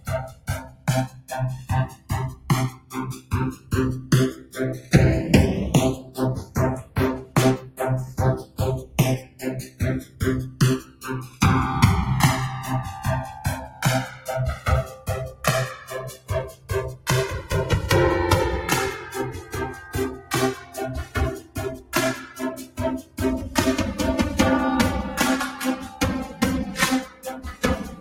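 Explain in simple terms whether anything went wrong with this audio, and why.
Two recording devices were running on clocks that didn't quite agree, so the left and right channels are drifting apart. The gap between them grows slowly across the clip, reaching a few milliseconds by the end. Because the two sides have been blended into one, some frequencies cancel, and those cancellations slide gradually. You hear this as a slow, swirling, whooshing flanging that runs under everything.

A noise suppressor, a tool built to clean up background hiss around a talking voice, was left switched on, so it is being applied to music or sounds it wasn't designed for. It mistakes steady, held parts and lingering echoes for unwanted noise and pushes them down, while sharp starts mostly slip through. Throughout the clip the level keeps dipping and recovering by a large amount, giving a pumping, fluttery, thinned-out quality.

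At certain moments the suppressor bites harder, and the sound is cut by the noise suppressor more than elsewhere. This happens from 0.0 to 4.9 s, 5.98 to 11.41 s, 13.35 to 15.44 s, 16.16 to 17.07 s, 19.39 to 21.93 s, 22.63 to 23.19 s, and from 27.06 s to the end. In those stretches, sustained or fading sounds sink noticeably or have their tails chopped short.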